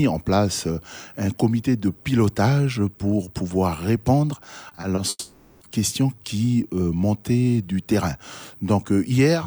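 The audio runs cleanly until about 4.69 s, when repeated packet loss (robotic sound) sets in through 4.99 s. Four short holes, none longer than 20 ms, get patched by stretching the last bit of sound, so about 80 ms of that 0.3 s stretch is filler. It comes across as choppy, with small chunks dropped. Right after, from about 5.09 s to 5.63 s, there's a longer break: the sound smears into a fading buzz or hiss for roughly half a second, then goes silent for about 30 ms before the audio picks up again, with that missing half-second simply gone. That's most likely a long network dropout, where nothing arrived and the receiver filled the gap until it gave up.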